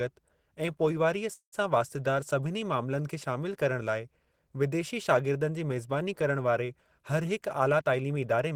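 At 1.33 s there's a call audio freeze running to 1.55 s. The last bit of sound gets stretched into a fading buzz or hiss, drops to near silence for about 100 ms, then picks up exactly where it stopped, with nothing lost. That's likely delayed packets draining the jitter buffer.

Right after "वारे हरहिक", from 7.60 to 8.52 s, you get a jitter buffer speed-up. The buffer was overfull, so tiny pitch-period slices were trimmed repeatedly, roughly a tenth of a second in total. The speech runs about 12% fast at unchanged pitch and sounds rushed.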